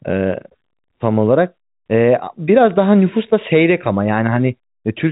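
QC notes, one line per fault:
No faults found in this speech, which carries the expected telephone-band G.711 A-law coding with nothing above 3.8 kHz.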